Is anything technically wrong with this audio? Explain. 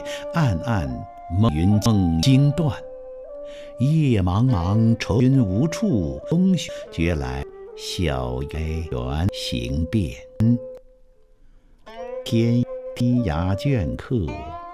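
Yes. The audio has chunks out of order at 1.49 to 2.23 s, 5.20 to 6.69 s, 7.43 to 8.92 s, 9.29 to 10.77 s and 12.26 to 13.00 s. Blocks of about 0.37 s were written late. Each plays after the blocks that should follow it, one block late in the first and last events, three in the others. Nothing is lost. Each event sounds jumbled, with three hard joins.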